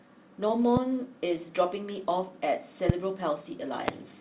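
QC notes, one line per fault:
0.48–0.52 s, short concealed packet loss: About 20 ms of the call arrived too late for the decoder, and roughly 16 ms of that was filled by extending the preceding sound, pitch-repeated if voiced and shaped noise if not, before crossfading back. It is heard as a brief smear or wobble. On a spectrogram, harmonics briefly freeze or repeat with a soft seam at each edge. The whole event sits under the 4 kHz ceiling of the narrowband call path.
0.77–0.79 s, 2.89–2.92 s, 3.88–3.91 s, loud pop: Three single sharp pops sit on top of the sound, which continues underneath. Each is about 25 ms long, rising in level from about 15 dB to about 20 dB to about 25 dB above the signal. The likely cause is a voltage step or pulse, such as static, a switch or a driver glitch. On the waveform each is a tall spike. On a spectrogram each shows as a thin vertical broadband stripe across the whole band up to 4 kHz.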